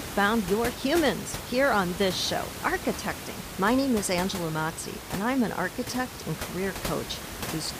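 Nothing goes wrong anywhere in this speech clip, and the only thing in the background is the room's own noise, sitting about 10 dB under the speech, which belongs to the recording rather than the system.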